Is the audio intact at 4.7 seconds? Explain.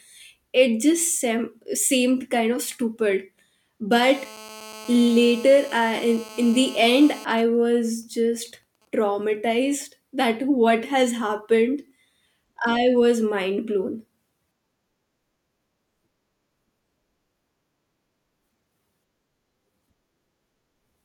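No. From 3.92 to 7.25 s a GSM phone buzz sits about 20 dB below the speech: a nearby phone on a call transmits in 217 Hz bursts that the circuitry rectifies. Unlike smooth 50 or 60 Hz mains hum, it is a hard, raspy, harmonic-rich buzz.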